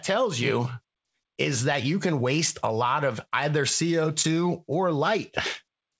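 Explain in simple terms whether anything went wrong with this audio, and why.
Around 4.22 to 4.26 seconds there is a brief smear in the speech, a tiny wobble where the sound seems to stretch for a moment instead of moving on. This is short concealed packet loss. About 20 milliseconds of the call arrived too late to be played, so the receiving end filled the gap by extending the sound just before it and then blended back into the real audio. The call path also limits the sound to frequencies below 8 kHz.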